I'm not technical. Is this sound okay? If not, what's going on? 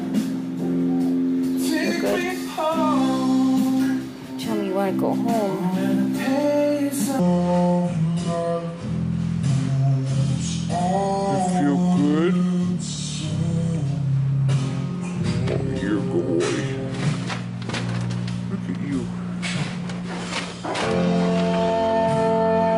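No. From 7.19 s to the end, the sound suddenly drags and drops deep, playing at about two-thirds of its proper speed and roughly seven semitones lower. This is a section at the wrong speed, likely from being played against the wrong clock.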